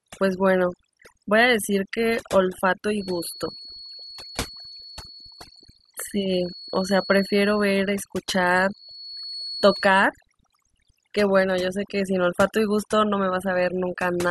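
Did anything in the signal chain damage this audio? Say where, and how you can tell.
Yes. Overdone noise removal in the call-processing stage damages this speech from start to finish. Between phrases the background falls to near silence broken by twinkling, chirpy specks. The suppressor is set too aggressive: any frequency band close to its noise estimate gets cut hard or removed, taking quieter voice detail with it. A spectrogram shows scattered isolated dots in the gaps and patchy, hollowed-out harmonics.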